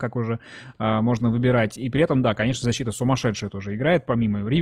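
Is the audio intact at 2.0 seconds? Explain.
No. At 2.0 seconds you're inside a stretch of adaptive stream at a lower bitrate, which runs from about 0.83 s right to the end of the clip. The player switched down to a leaner encode when the connection slowed, and it sounds like a step from roughly 64 kbit/s Opus to about 24 kbit/s. The speech picks up more codec artefacts, and the switch is abrupt with no gap.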